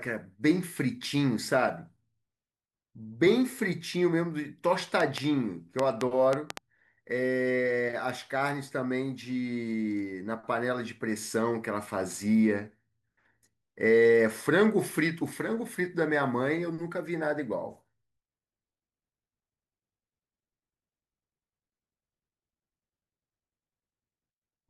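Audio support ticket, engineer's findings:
Train of clicks, 5.00–6.58 s in the speech: about seven sharp ticks, uneven spacing, averaging 3.8 per second, peaking about 20 dB above the signal, audible in gaps too. Waveform shows isolated near-vertical spikes of similar shape. Spectrogram shows thin full-band vertical lines at irregular intervals. Cause likely external interference or a faulty connection or power supply injecting repeated pulses into the path.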